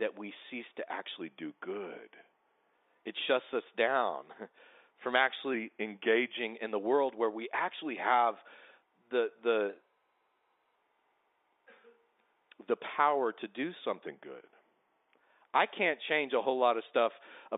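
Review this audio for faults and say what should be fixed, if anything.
From 1.22 to 2.74 s, just after "we cease to", and again from 5.54 to 6.37 s, just before "in the world where", the speech slows by 6.43% and drops 115 cents, a little over a semitone, then snaps back. This is likely a drift correction step, where clock-matching software changed the playback rate all at once to manage its buffer. Unlike wow or flutter, which waver gradually, each shift is sudden and holds steady, with speed and pitch moving together. To prevent it, keep clock corrections far under 1% and spread them smoothly over time. The G.711 telephone coding, heard as the narrow 300 to 3,700 Hz line band, is not at fault.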